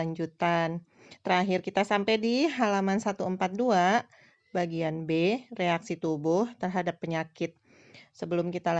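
Listening through this recording of speech, nothing technical stood out.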